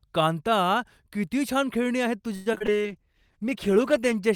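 From 2.35 to 2.70 s, repeated packet loss left five gaps, the longest 106 ms. Nearly half the stretch is patched by extending earlier sound, so the speech turns choppy, with pieces missing.

At 2.69 s a call bitrate drop takes the encoder from 64 to 13 kbps until 4.23 s. The coarser coding makes the speech rough, watery and duller in its highs.

Between 2.76 and 2.93 s, a jitter buffer slow-down repeats short pitch periods to rebuild its reserve, adding 49 ms. The speech plays at 77% speed without any change in pitch, so the sounds come out drawn-out.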